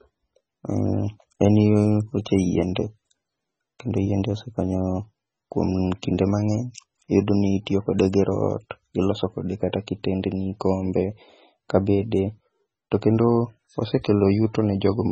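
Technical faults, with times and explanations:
Throughout, MP3 compression: nothing is present above 8.3 kHz, and the speech has a watery, swirling quality with metallic chirps on s sounds, heavy damage that points to a very low bitrate of about 16 kbps and is likely caused by MP3 encoding. The encoder, short of bits, cuts the treble at a fixed frequency and drops weak frequency lines that flicker on and off between frames. That flicker tells it apart from a simple low-pass filter, which would dull the sound without the swirl.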